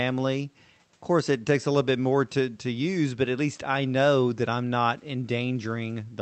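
A speech recording with no technical faults. The call codec's high end stops at 8 kHz, and faint room noise sits about 41 dB below the speech.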